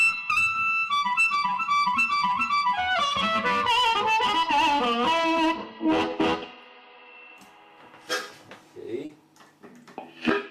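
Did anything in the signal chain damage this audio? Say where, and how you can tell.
Yes, at the network stage. From about 9.05 to 9.11 s there's a short concealed packet loss. Roughly 40 ms never arrived in time, so the receiver stretched the preceding sound across the gap and blended back, leaving a brief smeared, wobbly patch.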